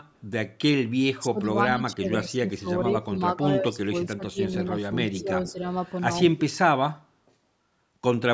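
An echo leak at 0.14 to 0.21 s most likely comes from a far-end loudspeaker whose echo canceller let part of the picked-up speech return. A copy delayed by 156 ms sits very faintly under the speech, some 40 dB down. It recurs at 5.14 to 5.21 s with the same delay, but much stronger, only about 15 dB below the speech.

The other fault is speech suppressed in double talk. With both sides talking at once, the canceller likely could not tell its own talker from loudspeaker echo and pulled both down. The speech dips by roughly 20 dB at 1.13 to 1.49 s and across much of 1.71 to 4.94 s, where it is affected over about two seconds in all. It drops by around 15 dB at 5.2 to 5.64 s, and only slightly, a few decibels, at 6.23 to 6.35 s.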